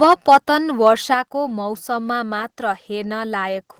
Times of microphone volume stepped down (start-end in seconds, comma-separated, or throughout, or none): 0.13, 1.14